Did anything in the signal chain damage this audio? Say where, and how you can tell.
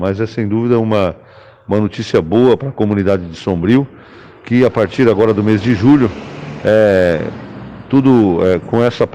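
Yes. Hard clipping runs through the whole clip. Loud peaks are driven about 5 dB past the ceiling of a converter or sample-format stage, so their tops are sliced flat. Only a small share of samples, around 2%, is affected. That produces crackle on the peaks.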